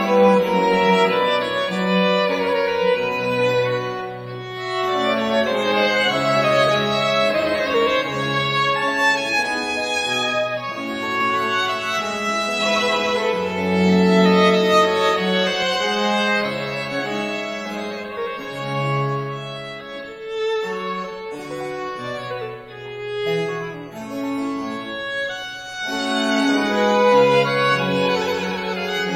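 From 11.21 s to 15.63 s a doubled audio track appears: a second full-band copy trails the original by about a third of a second, roughly 5 dB quieter, with no decay or room colour. It likely comes from a slower capture path. Both edges are abrupt.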